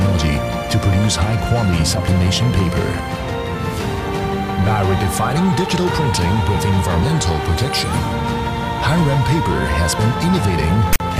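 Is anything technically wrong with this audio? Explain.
Yes. From 10.93 to 11.0 s, file tags are played as audio: tag text read as samples gives a harsh, one-sided rasp ending in padded silence. Its hard edges and DC-offset character distinguish it from random dropout noise.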